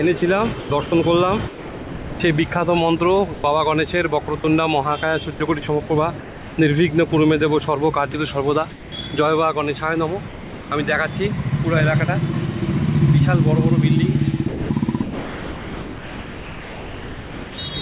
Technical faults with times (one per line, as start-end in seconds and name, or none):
0.18-2.20 sound chopped by the voice detector
3.34-3.44 sound dropped by the voice detector
4.26-4.44 sound chopped by the voice detector
5.36-7.12 sound chopped by the voice detector
8.12-8.14 sound dropped by the voice detector
8.12-8.92 comfort noise in place of the background
10.28-10.70 sound dropped by the voice detector
14.48-17.58 sound chopped by the voice detector